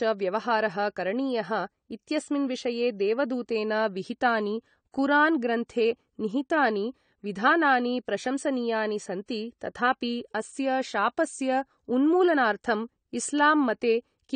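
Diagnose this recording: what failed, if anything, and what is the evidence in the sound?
The fault sits at the codec stage and runs throughout. The speech is dull, with nothing above 9 kHz, and sustained sounds and sibilants carry a smeared, warbling texture. This is likely AAC compression, consistent with AAC-LC at around 32 kbps. Holes in the spectrum and swirling noise separate it from a plain low-pass filter.

Pre-echo occurs from 9.26 to 9.28 s, between "विधानानि प्रशंसनीयानि" and "तथापि अस्य शापस्य". A short hiss lasting about 26 ms comes before the attack, and the onset sounds softened. Quantisation noise spread across the transform block leaks into the quiet moment ahead of the transient. It is noise before an onset, not a gap or a click.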